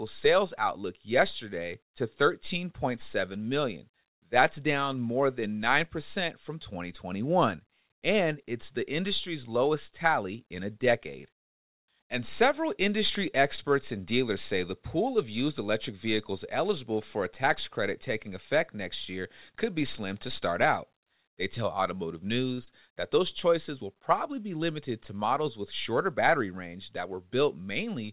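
At 13.56 to 13.69 s, between "several industry" and "and dealers say the", there is a short stall from a late packet. The jitter buffer ran dry, so the receiver held the last sound for about 19 ms until the packet arrived, then resumed exactly where it left off. It is heard as a slightly drawn-out, faintly buzzy sound. Unlike packet loss, nothing is skipped and the timing simply stretches.

A second stall follows at 22.54 to 22.59 s, just before "that those choices will". This time the sound is held for about 32 ms, but again no audio goes missing.

Only 0.06 s later, at 22.65 to 22.69 s and still ahead of "that those choices will", comes short concealed packet loss. About 20 ms of audio never reached the decoder. The receiver covered the gap with roughly 15 ms of extrapolated sound before blending back into the real signal. Here something is actually lost rather than delayed, so instead of a held sound there is a brief smear or wobble, and the timing does not stretch.

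All of this sits on a G.711 mu-law call path with nothing above 4 kHz.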